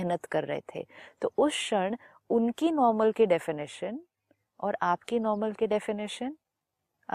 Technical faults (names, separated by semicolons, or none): none